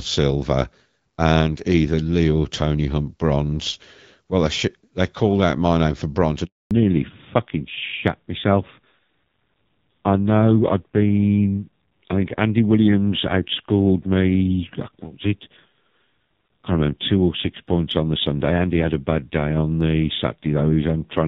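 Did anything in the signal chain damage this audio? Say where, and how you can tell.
Yes. The first damage is a handover gap at the network stage. Right after "my name for bronze" the speech collapses within a few tens of milliseconds at 6.45 s. Silence holds until 6.71 s, about 260 ms. The voice dies away quickly, and nothing is smeared or repeated. That points to a call switching networks. No speech frames reached the receiver during the switch, so that stretch of speech is simply gone.

The second is a fallback to narrowband at the codec stage. From 6.71 s to the end, nothing is left above 4 kHz. Before the gap the audio carries the light coding of an HD Voice link, which fits AMR-WB at 12.65 kbit/s. After it the voice turns dull and rough. That suits an older narrowband codec at a low rate, consistent with AMR-NB around 5.9 kbit/s. The new link came up with less bandwidth.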